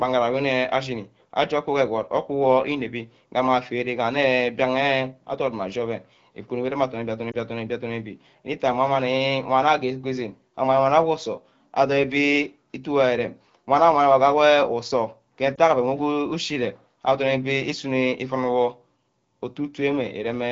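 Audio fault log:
7.31–7.37 s and 15.55–15.58 s, lost AMR speech frames: each event is a brief dip or warble, short enough to point to a single missing 20 ms frame. The decoder fills the gap by repeating the last good pitch and vocal tract settings at reduced gain, so the sound smears rather than cutting out. Speech recovers almost at once, with clear AMR-WB coding on either side.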